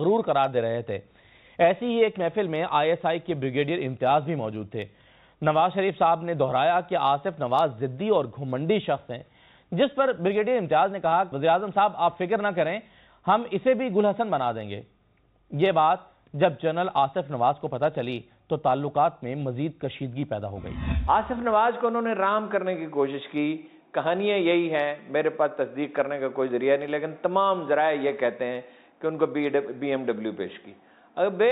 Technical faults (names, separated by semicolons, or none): none